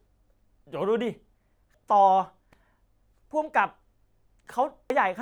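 At 1.74 s and again at 4.90 s the speech is broken by a brief blip, the sign of damaged data in a compressed stream: corrupted bytes cause the decoder to misread a frame, lose sync and hunt for the next valid header.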